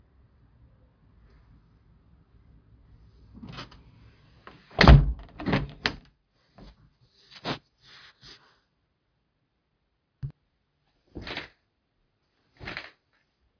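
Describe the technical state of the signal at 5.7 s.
At 5.7 s the signal is intact, with no audible fault at that moment.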